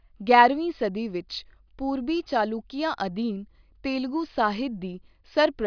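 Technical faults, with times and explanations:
Nothing technical stands out anywhere in this speech recording.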